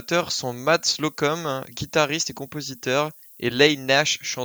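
From start to finish, the speech carries low bit depth with noise shaping. Each sample is stored with very few levels, and the sound fits about 9 bits. That rounding leaves an error. Here the error is fed back and pushed upward in frequency, away from the middle of the band. The result is a steady, thin hiss. It sits roughly 25 dB below the speech. It grows much stronger toward the top of the band.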